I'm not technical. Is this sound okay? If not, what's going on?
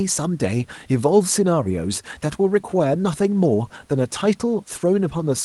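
Yes, nothing is wrong with this speech recording. It has the slightly trimmed top end you'd expect from a normal internet call, and faint background noise from the room sits well underneath the speaking.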